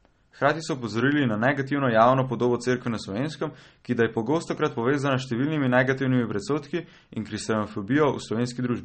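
All the way through the clip the speech has that smeared, watery quality, and there's simply nothing above about 8.4 kHz, so the top end sounds sliced off. That's likely MP3 compression. The encoder has run short of bits, dropped the treble at a fixed point and let the weaker frequency detail flicker in and out between frames. The damage is plainly audible, and it fits a low bitrate somewhere around 34 kbps.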